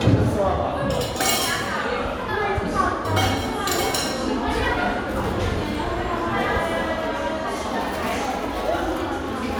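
No technical faults can be heard anywhere in this recording.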